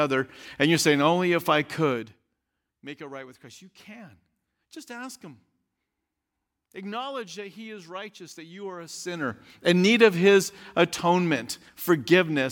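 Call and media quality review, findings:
No faults found: the speech signal path shows no dropouts, distortion or timing disturbances anywhere in the recording.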